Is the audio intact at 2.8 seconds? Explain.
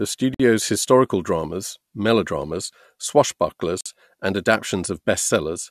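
Yes, at 2.8 seconds the speech runs on without any audible technical fault.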